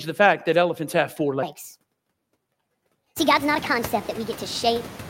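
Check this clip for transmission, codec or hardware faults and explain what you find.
Two faults show up here, one running the whole way through and one covering most of the clip.

Noise suppressor artifacts run throughout: the suppressor pulls steady-noise bands down by about 17 dB frame by frame, so the background pumps between phrases.

A section at the wrong speed starts at 1.43 s, right after "that elephants have four", and runs to the end. It plays 1.44 times too fast, about seven semitones high, so the speech turns high and hurried. That's likely from an editor or player resampling against the wrong clock. The room noise that swells around 3 s comes up through this sped-up stretch too.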